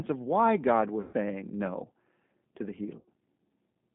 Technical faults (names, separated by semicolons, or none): G.729 codec; VoIP packet loss concealed by the speech codec